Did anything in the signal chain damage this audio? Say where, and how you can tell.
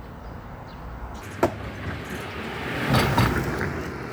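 Yes. From 1.22 s to the end, the sound plays back at 1.67 times speed, with pitch jumping by around ten semitones at the same instant. This is a section at the wrong speed, likely from an editing or playback stage running that segment against the wrong clock.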